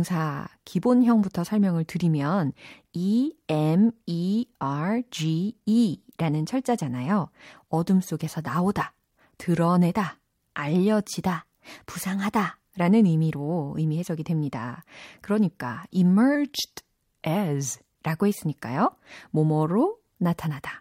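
A speech clip with two drift correction steps. From 11.37 to 12.60 s, playback runs about 5.7% fast and the pitch rises by roughly 95 cents, close to a semitone. From 16.35 to 17.81 s, it runs about 5.7% slow and drops by roughly 101 cents. Each time, speed and pitch jump together and then snap back. The likely cause is clock-matching software abruptly changing the playback rate to refill or drain its buffer.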